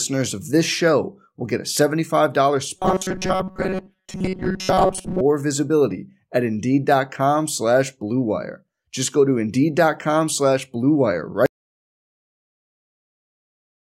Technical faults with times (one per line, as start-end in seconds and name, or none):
2.76-5.21 robotic sound from repeated short buffers
11.46-13.81 audio dropout to silence